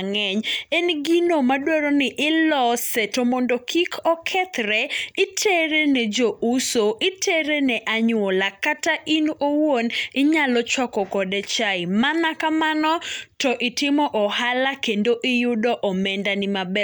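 Speech recording with no audible technical faults.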